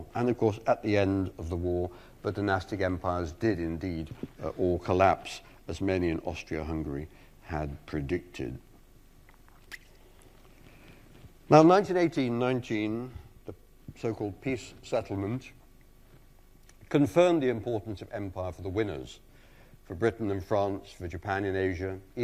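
No technical faults can be heard anywhere in this audio.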